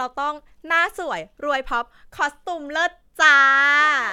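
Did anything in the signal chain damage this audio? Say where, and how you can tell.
No, nothing along the chain seems to have touched this speech recording, and there's nothing to trace back to any stage.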